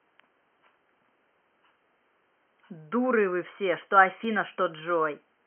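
At 4.24 s a brief glitch cuts into the speech: damaged data in the compressed stream, where the decoder misreads corrupted bytes and loses sync before recovering, with room noise about 50 dB below.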